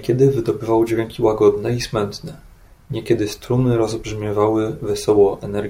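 The clip is speech with a single wireless microphone noise hit from 0.86 to 0.92 s. It lasts about 56 ms. A brief swish of static is heard. The radio link from the FM transmitter faded as reflected signals cancelled, letting receiver noise surge through.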